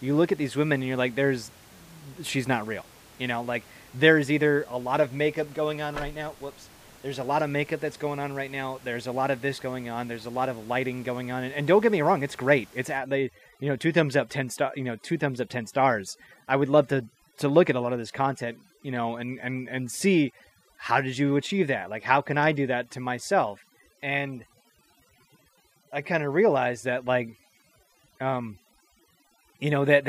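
A speech recording with room noise sitting about 26 dB below the voice is degraded from 12.97 s to the end, with the background dropping and breaking up into twinkling specks. This is overdone noise removal: an aggressive reducer mutes individual frequency bands near its noise estimate, taking quiet parts of the voice with them.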